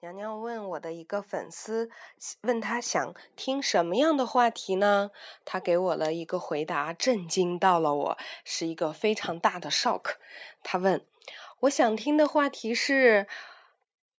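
From 0.05 to 3.86 s, automatic gain rising: the gain control judged the input too quiet and lifted it about 13 dB, so speech and background swell together. The waveform envelope widens steadily, and the spectrogram brightens evenly below its 8 kHz ceiling.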